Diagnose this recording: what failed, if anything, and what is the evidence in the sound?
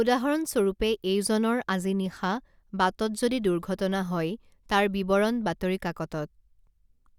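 No fault is audible anywhere.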